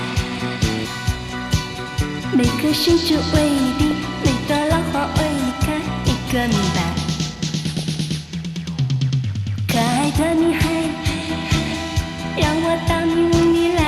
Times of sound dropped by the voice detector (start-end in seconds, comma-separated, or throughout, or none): none